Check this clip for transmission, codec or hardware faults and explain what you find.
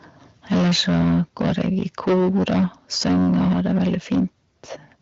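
Two hardware-side faults stand out, both most likely from microphone input gain set too high.

Microphone overload runs from 0.51 to 2.65 s and again from 2.95 to 4.25 s. The peaks go past full scale by about 14 dB in the first stretch and about 11 dB in the second. Their tops are flattened against the converter's ceiling, with about a fifth of the samples clipped. The loudest syllables take on a harsh, crackling, buzzy edge. The likely cause is an input volume set far too high.

The microphone volume steps down twice, at 0.52 s and 3.53 s. Each drop comes while the distortion is under way. The first is about 2 dB and the second about 3 dB. Sound and background fall in level together, abruptly, in a single step. This is likely the call software's automatic gain control lowering the device input after detecting clipping. The cuts are too small to stop the distortion, so the overload continues past both steps. 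The audio stays band-limited, with nothing above 7.6 kHz, which fits HD Voice wideband coding at a mid-to-high rate.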